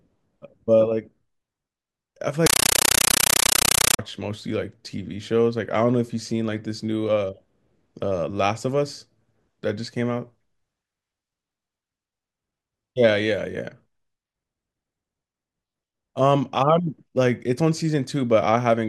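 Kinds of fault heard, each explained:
Compressed stream played as audio: undecoded AC-3 data treated as samples, heard as loud chattering static in 9.33 ms noise bursts repeating 31.25 times a second.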